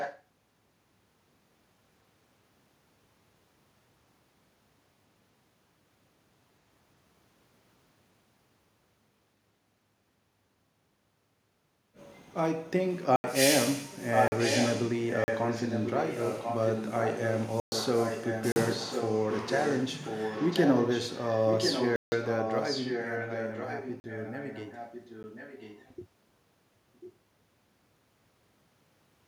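Echo leak, 0 to 0.23 s: a copy of the speech returns about 1.04 s late and only slightly quieter, likely because a far-end loudspeaker's echo canceller let the microphone pickup through.

Blocks of digital silence at 13.16 s (80 ms), 14.28 s (40 ms), 15.24 s (40 ms), 17.6 s (120 ms), 18.52 s (40 ms), 21.96 s (160 ms), 24.0 s (40 ms) and 25.23 s: the sound cuts out abruptly, leaving short holes or ticks.

Echo leak, 14.01 to 25.92 s: the same roughly 1.04 s delayed, near-level copy comes back under the speech in this stretch.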